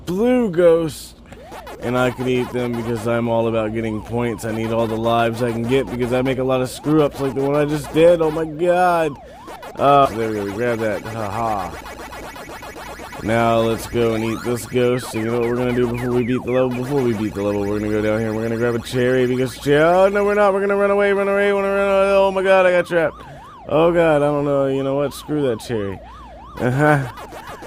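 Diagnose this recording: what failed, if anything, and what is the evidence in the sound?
The failure is at the network and jitter buffer stage. At 10.05 to 10.07 s the sound jumps forward with no gap and no fill. Roughly 0.4 s of audio is missing. The two sides of the cut are joined almost directly. This is a skip ahead. Later audio was already queued, so a stretch was dropped rather than waited for. It dropped about 0.4 s of delay in one step.

Right after, from 10.15 to 10.94 s, the sound runs about 8 percent fast at unchanged pitch. It feels briefly hurried. This is a jitter buffer speed-up. The buffer still held more audio than its target. The receiver trimmed short pitch-period pieces, many times in a row. In total it removed something like 70 ms. That brought the delay back down smoothly.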